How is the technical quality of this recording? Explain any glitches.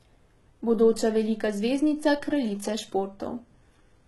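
The recording is heavily compressed throughout, with one fault present from start to finish. HE-AAC compression is likely: the lower band is coded sparsely and the treble is rebuilt by copying it upward, so upper harmonics misalign. S sounds turn gritty and lispy, nothing reaches above 11.8 kHz, and the damage is heavy, consistent with around 16 kbps.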